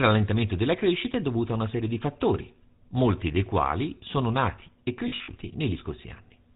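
From start to finish the speech has a buzzy, gravelly roughness and nothing above 4 kHz. That is the sound of the GSM full-rate codec, which fits its 13 kbps rate. It rebuilds the voice from a vocal-tract model driven by sparse, regularly spaced pulses, and the damage is plainly audible.

Between 5.08 and 5.29 s, right after "quali sono nati e", the sound briefly freezes into a rough, metallic ring several times over. These are lost GSM frames. About 120 ms of audio went missing, scattered across roughly 200 ms, which points to around six lost frames. The decoder filled each gap by repeating the last good frame. Each run was short, a few tens of milliseconds at most, so the sound never had time to fade to silence.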